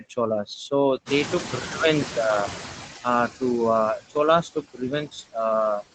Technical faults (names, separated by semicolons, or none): noise suppressor artifacts; noise suppressor catching up; speech cut by the noise suppressor